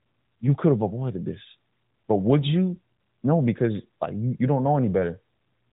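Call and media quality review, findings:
No findings for this call and media quality review.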